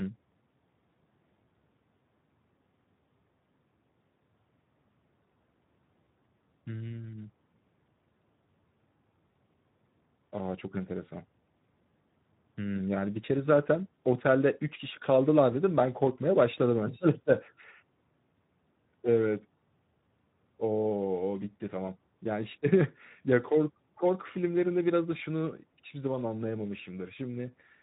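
Throughout the clip, the speech has passed through the Speex codec at a low setting, with a thin, hoarse quality that fits a rate around 11 kbps. Too few bits are left to model the excitation signal, so the harmonic structure of the voice is replaced by a coarse, noisy approximation, and the damage is plainly audible as a rough, noisy edge on the speech. The coder also keeps nothing above 3.8 kHz, leaving the speech dull and telephone-narrow.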